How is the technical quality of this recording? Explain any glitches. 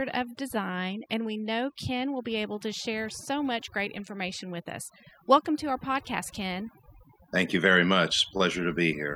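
The recording carries one persistent fault. Overdone noise removal runs throughout the speech. A noise reduction stage was set far too aggressively, so any frequency band that sits close to its estimate of the background noise is pushed down hard or cut out entirely, and the quieter parts of the voice get caught along with the noise. The pauses fall to near silence dotted with twinkling, chirpy specks.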